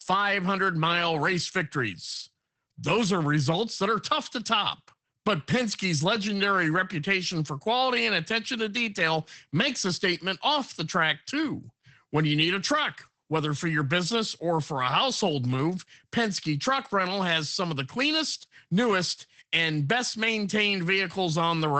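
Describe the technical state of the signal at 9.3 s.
At 9.3 s the speech carries Opus voice compression, present across the whole clip rather than at this moment alone. The SILK linear-prediction coder is modelling the voice with a coarsely quantised excitation, which fits a rate of about 12 kbps, so the sound is plainly muffled, hoarse and faintly robotic. A spectrogram shows a hard ceiling near 8.6 kHz with nothing above it, and the harmonics below look smeared and grainy.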